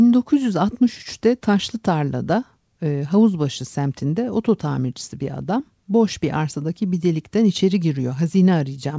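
There are no technical faults to describe in this speech, which passes through the call path with its usual wideband sound, nothing above 8 kHz.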